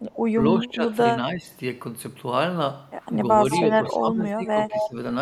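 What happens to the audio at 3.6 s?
An echo leak runs from 3.51 to 3.59 s: a delayed copy of the speech, about 0.21 s late and only a few decibels quieter, likely from a far-end loudspeaker the echo canceller missed. Speech suppressed in double talk follows from 3.64 to 4.96 s. The speech dips and chops, falling by up to around 15 dB for roughly a second in total, likely because the canceller mistook overlapping talk for echo.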